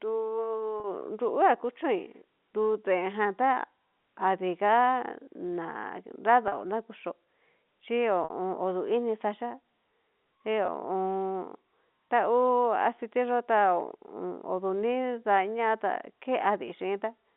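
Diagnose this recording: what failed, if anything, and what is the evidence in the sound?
Packets were lost in the network, and the receiver bridged each gap with packet loss with pitch repetition at 0.80, 6.48, 8.24 and 10.66 s. The gaps run 20 to 60 ms, which fits 20 ms packets. The 20 and 40 ms gaps sound slightly held and buzzy, while the 60 ms gap at 8.24 s fades into silence and the speech returns with a short cross-fade. The waveform repeats one period, and the spectrogram shows frozen harmonics.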